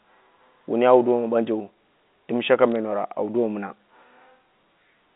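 At 2.72 to 2.76 s, just after "ɓanjeu dɨm shaka", bit errors on a digital phone line corrupted a few samples in the speech. A small fraction of bits on the G.711 line were flipped, and each flip corrupts a single logarithmic sample. Hits on the sign or upper bits become sharp isolated ticks. Unlike packet loss, nothing drops out or gets concealed, and the band-limited telephone speech carries on unchanged beneath the clicks.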